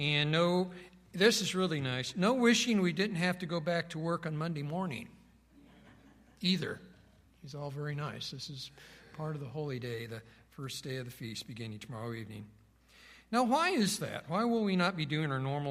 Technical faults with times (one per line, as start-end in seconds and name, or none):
none